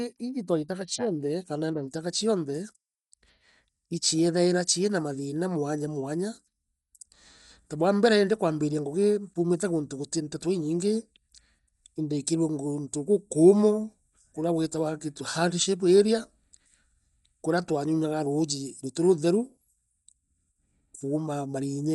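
A low-bitrate Dolby Digital compression stage, likely an AC-3 encode at a setting consistent with about 64 kbps, runs across the whole speech recording. Starved of bits, the encoder has narrowed the band so nothing survives above 11.5 kHz, and many frequency lines below that carry no real detail and are filled with decoder noise. The result is plainly audible throughout: a dull, closed-in top end with a rough, fluttering grain clinging to voiced sounds.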